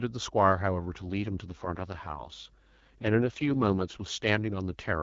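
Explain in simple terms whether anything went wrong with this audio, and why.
Two things went wrong. The first is mains hum. Electricity from the power supply leaked into the recording chain, most often through a ground loop or a nearby transformer, and it adds a low, steady buzz at 50 Hz from start to finish. The buzz sits quietly underneath the speech, but it never stops, so you can hear it in the pauses as well as behind the talking.

The second is an AMR rate drop. This clip went over an HD Voice phone call, and from 1.02 to 4.28 s the mobile network told the phone's voice codec to switch to a lower-quality setting. It does this when the radio link is weak, so that more of the data goes to protecting the call against errors. There is no gap and the voice doesn't get muffled, but it turns rougher and more robotic for those three seconds. It clears up again once the call returns to its usual setting at 4.28 s.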